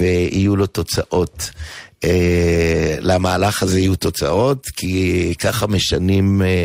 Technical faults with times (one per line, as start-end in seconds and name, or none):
none